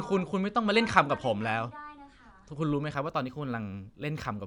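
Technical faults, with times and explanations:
2.95 to 4.46 s, imaging from linear upsampling. The sound fits a rate raised from 22 kHz to 44.1 kHz by joining samples with straight lines. That interpolation filters poorly. The top of the original band sounds dulled, and a faint mirror copy of the spectrum appears between 11.03 kHz and 22.05 kHz, roughly 40 dB below the speech. It gives sibilants a light metallic shimmer until the end of the clip.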